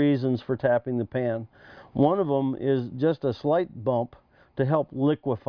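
No technical fault can be heard anywhere in the audio. Nothing in it calls for a timestamp or a closer look.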